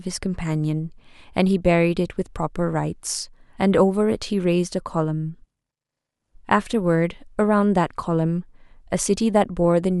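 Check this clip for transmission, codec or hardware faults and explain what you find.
No transmission, codec or hardware faults.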